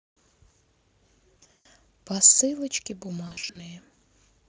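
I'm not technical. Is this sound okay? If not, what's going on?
No. Twice, at about 1.38 to 1.66 s and 3.27 to 3.62 s, the call lost bits of its data in transit. This is VoIP packet loss concealed by the speech codec: the decoder guesses the missing speech by stretching what it last heard and fading it down. The first stretch has a long gap, so the voice smears into a fading buzz or noise. The second has shorter gaps, and the voice takes a moment to recover.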